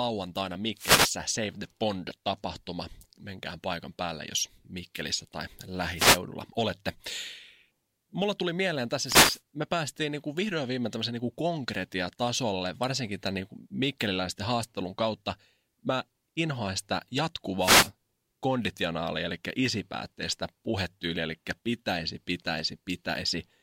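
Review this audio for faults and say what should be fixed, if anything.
The analogue FM wireless link faded as reflected radio paths cancelled, so receiver noise surged through four wireless microphone noise hits. Each is heard as a brief static swish over the speech: at 0.75–1.16 s, 5.96–6.19 s, 9.03–9.41 s (after "tuli mieleen") and 17.59–17.90 s (after "inhoan sitä"). A diversity receiver with antennas kept in clear line of sight of the transmitter would prevent these dropouts.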